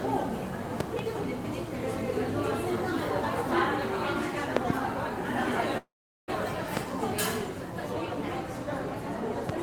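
Around 0.80 to 1.01 s there's a loud pop, actually two in quick succession, about 15 dB above the everyday sound, likely a voltage step from a plug, switch or static. Another double pop hits at 4.57 to 4.72 s, harder, about 25 dB up. From 5.77 to 6.30 s comes a call audio freeze: the last sound buzzes briefly, then about 400 ms of silence, likely packets held up and the jitter buffer running dry. Nothing is lost, and the sound resumes half a second late. Single pops follow at 6.77 to 6.79 s, about 20 dB up, and at 9.49 to 9.52 s, about 15 dB up, with the sound carrying on underneath.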